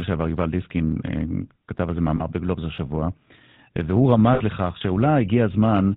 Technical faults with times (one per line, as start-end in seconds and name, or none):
0.00-5.97 GSM full-rate codec
2.16-2.21 lost GSM frames
4.34-4.42 lost GSM frames